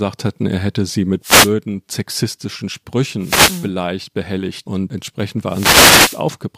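The speech is hit three times by wireless microphone noise: from 1.22 to 1.52 s, just after "er hätte sie mit"; from 3.19 to 3.69 s, just before "behelligt und entsprechend"; and from 5.48 to 6.24 s, right after those same words. Each lasts longer than the one before: 0.3 s, then 0.5 s, then 0.76 s. The analogue FM radio link fades as reflected signals cancel at the receiver, so receiver noise rises over the voice as a brief swish or burst of static.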